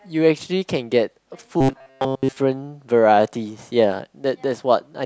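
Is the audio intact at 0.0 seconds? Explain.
Yes, at 0.0 seconds the speech audio is intact, with no dropout, click, distortion or other fault at that moment.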